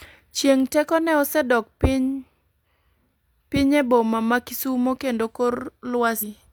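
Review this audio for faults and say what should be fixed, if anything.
Compressed frames skipped, at 6.18 to 6.24 s near the end of the speech: the audio jumps forward by about a fifth of a second. That jump fits several whole frames of about 46.4 ms each going missing from the file or being rejected by the decoder as damaged. To prevent it, verify file integrity after encoding and transfer.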